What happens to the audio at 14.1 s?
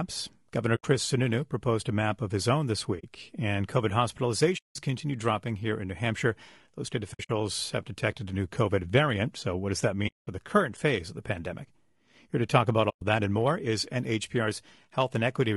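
At 14.1 s the speech sounds rough and grainy, as it does throughout the clip. Noise fills the gaps between pitch harmonics, and the top band sounds thin. This is likely low-delay AAC compression. Its short frames resolve harmonics poorly, and the damage fits a bitrate near 32 kbps.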